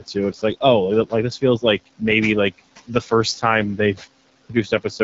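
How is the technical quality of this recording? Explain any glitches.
The quality is held back by one fault that runs the whole way through. An AMR wideband (HD Voice) codec at 8.85 kbit/s models the speech as pulses through a vocal tract filter, which at this low rate makes it sound rough and raspy. Nothing reaches above 7.5 kHz, and the room noise sits about 20 dB under the speech.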